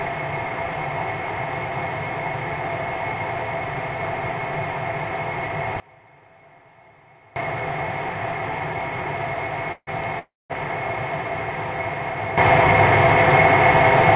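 At 5.8 s a gain setting was likely applied without a ramp, a sudden gain jump: the sound and its background noise drop together by about 24 dB until 7.36 s.

At 9.72 s and 10.19 s, packets likely stalled and emptied the jitter buffer, a call audio freeze. The last sound is stretched into a fading buzz, then silence, for 0.15 s and 0.31 s. The sound resumes where it stopped, delayed, with nothing lost.

From 12.38 s to the end, another sudden gain jump, likely an unramped gain change, lifts the sound and noise together by about 12 dB. Throughout, the call codec's band limit leaves nothing above 4 kHz.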